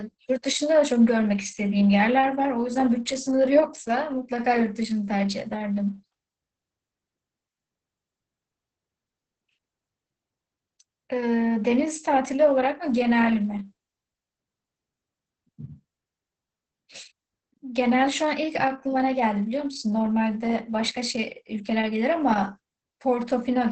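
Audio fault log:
Throughout, Opus voice compression: the speech sounds muffled, hoarse and slightly robotic, with nothing above 8.6 kHz. A linear-prediction voice coder is rebuilding each stretch of speech from a coarsely coded excitation, which points to SILK wideband mode at about 10 kbps.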